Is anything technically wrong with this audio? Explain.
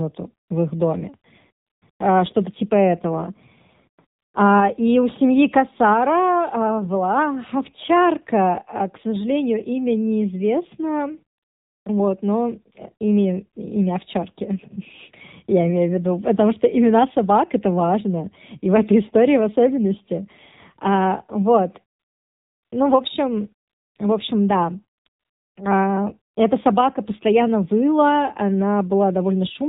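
Yes. Throughout, the speech sounds thin, buzzy and synthetic, with nothing above 4 kHz, which points to the AMR narrowband mobile codec at a low rate, consistent with about 7.4 kbps. AMR-NB samples at 8 kHz and rebuilds the voice from a vocal-tract model excited by a few pulses per 5 ms subframe. With so few bits for those pulses, the codec damage is plainly audible as a mechanical, reedy edge on every syllable.

Ten times, between 0.48 s and 26.35 s, the real background drops out and is replaced by a smooth, even hiss that switches in and out. These are AMR comfort noise gaps, lasting from 20 ms to 740 ms. The first comes at 0.48 s, just before "в их доме", and another runs from 1.66 to 1.82 s, right after it. Others fall around 24.98 to 25.56 s after "общем в общем да", and the longest is at 21.98 to 22.72 s. The sender judged these moments silent and stopped transmitting speech frames, so the receiver filled them with synthetic noise built from a coarse level-and-spectrum description.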